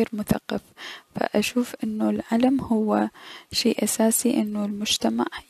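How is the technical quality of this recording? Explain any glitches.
No technical glitches can be heard anywhere in the recording. There is nothing in the audio that calls for an explanation.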